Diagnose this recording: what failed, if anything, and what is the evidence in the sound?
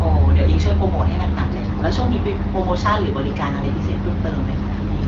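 AMR bit errors, network stage. From 4.52 to 4.60 s the speech turns hoarse and gargly, yet pitch and level hold. That span fits about four 20 ms frames. Flipped low-priority bits in the 12.65 kbit/s AMR-WB stream misplaced excitation pulses and skewed gain and spectral values.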